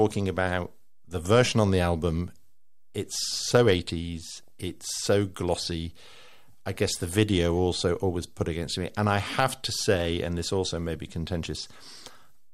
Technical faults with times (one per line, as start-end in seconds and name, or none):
4.33-4.48 DAB burbling